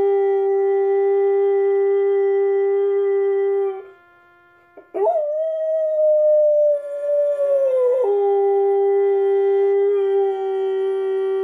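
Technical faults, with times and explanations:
No technical faults are audible anywhere in this recording.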